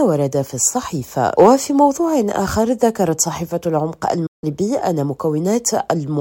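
At 4.26 s the sound drops out in a digital broadcast dropout and returns at 4.44 s. The receiver evidently stopped getting valid frames and muted, fading down over about 8 ms rather than cutting hard, so there is no click, just an abrupt hole. Roughly 160 ms of programme is simply gone, which fits about five lost frames. On a waveform this is a flat line with a tiny taper at its start; a spectrogram shows a clean vertical blank band across all frequencies.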